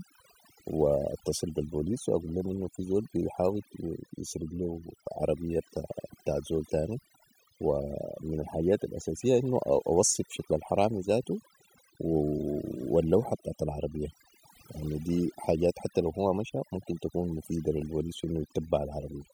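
Throughout the speech, overdone noise removal gates frequency bands near the noise estimate, leaving twinkling specks in near-silent gaps.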